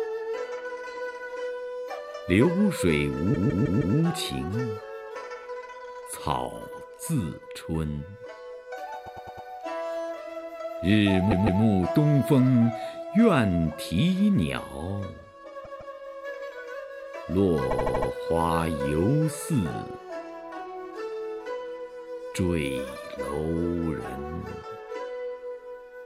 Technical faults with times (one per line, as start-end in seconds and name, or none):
3.33-3.96 repeated frames
9.05-9.47 repeated frames
11.30-11.61 repeated frames
15.64-15.95 repeated frames
17.70-18.09 repeated frames